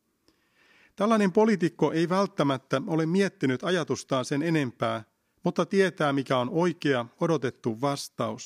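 Speech recording, no audible faults.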